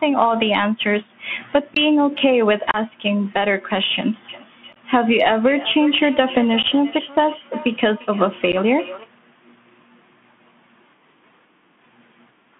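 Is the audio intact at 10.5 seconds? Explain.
No. At 10.5 s, as throughout, the speech carries Bluetooth CVSD headset codec damage: one-bit up/down coding with an adapting step, band-limited to about 150 Hz to 3.4 kHz. Unlike a simple narrowband filter, it adds granular hiss, and s sounds turn scratchy where the step can't keep up.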